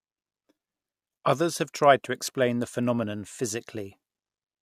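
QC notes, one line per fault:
No technical faults heard.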